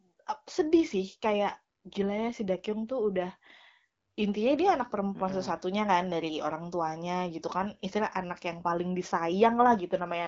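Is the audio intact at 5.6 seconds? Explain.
Yes, the audio is intact at 5.6 seconds, with the speech carried cleanly through the AMR wideband (HD Voice) codec at 12.65 kbit/s and nothing there beyond that codec's usual top-end limit.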